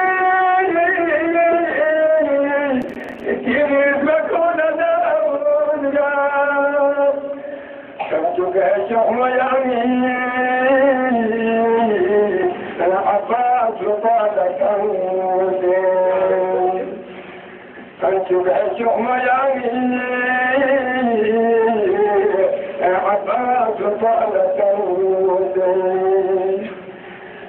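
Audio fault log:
2.82–3.24 s, processor overload crackle: for roughly 0.4 s the sound breaks into a gritty, tearing crackle, then clears once the load drops. The processor is failing to finish its short audio buffers on time, and deadlines are missed again and again over this short stretch. Each miss drops a few milliseconds of silence into the stream with hard edges on both sides. The gaps suggest buffers of around 5 ms, and some twenty of these dropouts close together merge into the burst of crackle.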